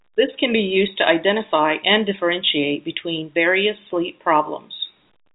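No faults heard in the speech; content stops near 3.8 kHz, as expected for G.711 telephone coding.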